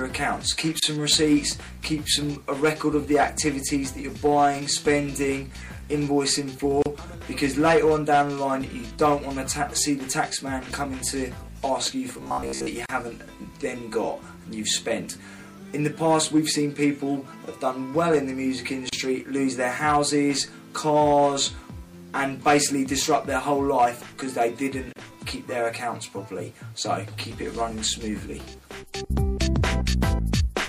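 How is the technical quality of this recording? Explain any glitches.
The technical quality is poor, with three kinds of fault.

Throughout, the sound has a watery, swirly character, with smeared attacks and chirpy high-frequency detail. This is likely MP3 compression at a bitrate around 64 kbps. With so few bits, the encoder cuts the treble at a fixed frequency and drops weak frequency lines that flicker in and out between frames. On a spectrogram, this shows as a hard horizontal ceiling on the high frequencies and speckled, patchy energy beneath it.

Gaps at a join of encoded pieces occur at 0.80–0.82 s (about 28.5 ms), then at 6.82–6.86, 12.86–12.89, 18.89–18.93 and 24.93–24.96 s (about 34.3 ms each), repeating every 6 seconds. Separately encoded segments were joined without trimming the encoder's start-up delay and end padding, so brief silences break the continuous sound before it resumes where it stopped. 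The waveform shows flat dropouts with slightly softened edges, and the spectrogram shows thin vertical blank stripes.

From 12.14 to 12.70 s, the sound turns into a rigid, metallic buzz that loosely tracks the original. This is robotic sound, likely from repeated short buffers. When new audio arrives too slowly, the last 15 ms or so is looped in its place, and most of this stretch is repeated material. That looping imposes a fixed pitch near 66.7 Hz. A spectrogram shows evenly spaced harmonic lines at multiples of 66.7 Hz, and the waveform shows an identical short pattern repeating.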